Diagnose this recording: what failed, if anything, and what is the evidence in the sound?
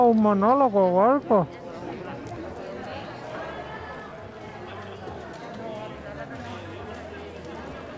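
Nothing failed; no stage shows any fault.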